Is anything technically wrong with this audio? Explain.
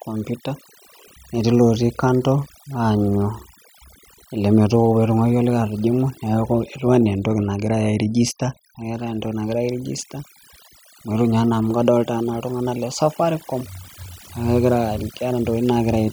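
Yes. Throughout the speech, the background drops to near silence dotted with twinkling specks. This is overdone noise removal: the noise reducer was set too strong, pulling individual frequency bands near its noise estimate far down, taking quieter parts of the voice with them.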